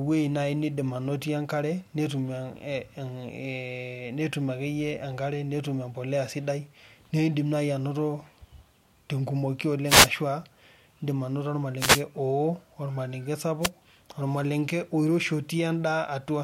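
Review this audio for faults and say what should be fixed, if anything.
Three wireless microphone noise hits break into the speech: 9.86 to 10.09 s, 11.78 to 12.02 s (after "indim anoto", before "oo ormalenke"), and 13.61 to 13.70 s (after "oo ormalenke", before "ormalenke oiroshi"). In each, the FM radio link fades as reflected paths cancel, so receiver hiss surges. Unlike a digital dropout's clean silence, each hit is a swish of static. Diversity receivers and better antenna placement would prevent these.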